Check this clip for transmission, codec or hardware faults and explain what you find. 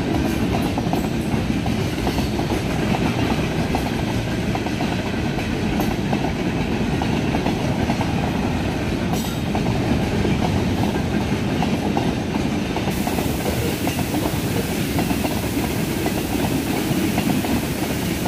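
One fault is present: low bit depth with dither, from 12.91 s to the end of the clip. The audio is requantised to about 5 bits, and dither is added before rounding. The dither turns what would be signal-correlated quantisation distortion into a random error, so it becomes a steady broadband white-noise floor, roughly 15 dB below the signal. It is heard as a constant, even hiss laid over the audio, with no crunch or grit.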